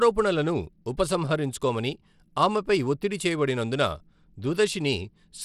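Throughout, the speech carries gritty, flickering treble with nothing above 15.9 kHz, likely Bluetooth SBC compression at a starved bit pool; spectrograms show patchy upper bands and a hard ceiling.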